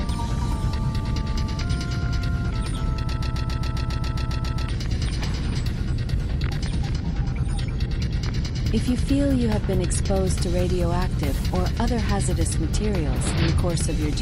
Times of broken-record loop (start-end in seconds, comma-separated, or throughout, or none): 3.12-4.68